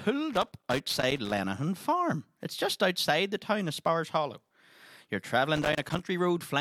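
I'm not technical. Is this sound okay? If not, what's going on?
No, there's a problem. You'll hear two bursts of loose connector crackle: one from about 0.33 to 1.38 s, and a shorter one from 5.56 to 6.0 s. That's the scratchy, uneven crackling. It happens when a worn or dirty plug or cable contact keeps losing and regaining its grip as it shifts, so the sound gets chopped into tiny on-off pieces. Reseating or cleaning the connection would likely fix it.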